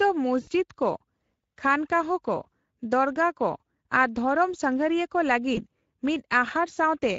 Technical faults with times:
0.00-7.18 Speex codec
0.41-0.49 VoIP packet loss concealed by the speech codec
2.43-2.46 VoIP packet loss concealed by the speech codec
5.55-5.61 VoIP packet loss concealed by the speech codec

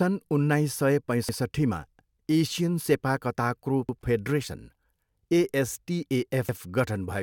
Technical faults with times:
1.29-1.39 overlapping chunks
3.89-3.99 overlapping chunks
6.49-6.59 overlapping chunks

